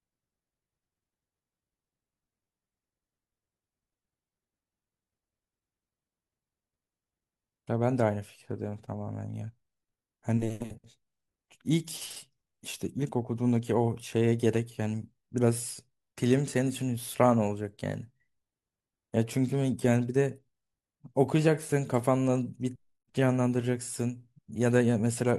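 No technical faults can be heard anywhere in this speech recording.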